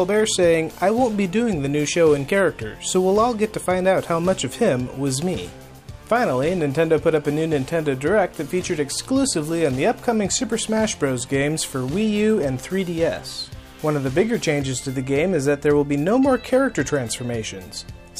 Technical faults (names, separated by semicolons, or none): crude rate conversion